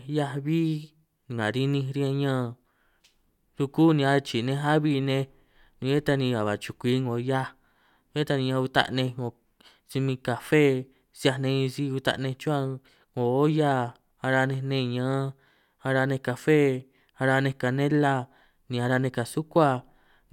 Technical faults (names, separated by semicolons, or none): none